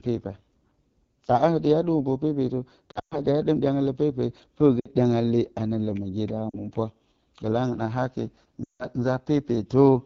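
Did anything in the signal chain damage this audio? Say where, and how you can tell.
Yes. The damage sits in the codec stage: this speech was carried over AMR wideband (HD Voice) at a very low rate, and the rasp suggests the 8.85 kbit/s mode. At the bottom of its range, the pulse-driven vocal tract model can no longer track the voice cleanly below 6.4 kHz, so the whole clip sounds rough and grainy. The top band is rebuilt from shaped noise.

There are also lost AMR speech frames in the network stage, where corrupted radio frames were thrown away and the decoder bridged them by repeating the last good pitch and vocal tract settings at falling gain. Between 2.91 and 3.20 s, just before "dǝ hye dɨm dyanga", about 160 ms vanishes across 200 ms, with the longest gap near 120 ms. At 8.64 to 8.86 s there is another 160 ms loss, and shorter dips come at 4.80 to 4.89 s (60 ms, before "dyanga le anǝ lǝmǝgyeda") and 6.50 to 6.59 s (40 ms, after it). 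The longer gaps drop to near silence within two frames.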